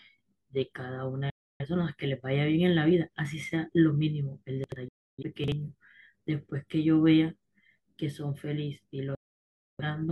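At 1.30 s the speech falls silent in a digital broadcast dropout, fading out over about 3 ms and staying muted until 1.66 s. The receiver lost the signal or rejected corrupt frames, and it mutes until clean data returns. About 0.3 s of programme is gone, which points to roughly seven frames failing. The same fault recurs from 4.88 to 5.23 s and, longer, from 9.15 to 9.84 s, where about 0.64 s vanishes.

Between 4.64 and 4.76 s there are chunks out of order. A 40 ms block plays two chunks later than it should, so a short stretch of sound is jumbled and stitched together at three hard joins. At 5.44 to 5.52 s a 40 ms chunk arrives one place late, with the same garbled effect. Unlike the dropouts, no audio is lost here and there is no silence; the material is all present, just shuffled.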